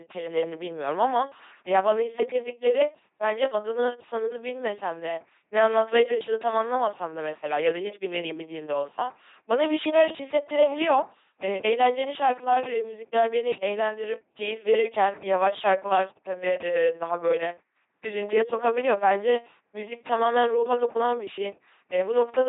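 From start to finish the speech has a buzzing, mechanical robot quality, with stretches that turn to hiss or harsh buzz where voiced and unvoiced sounds get confused, and nothing survives above about 3.8 kHz. This is LPC-10 vocoder damage, and it is heavy. At 2.4 kbit/s the codec discards the original waveform. It rebuilds each moment through a simple ten-pole filter fed by either a pulse train or noise, and every wrong voicing choice comes out as buzz or hiss.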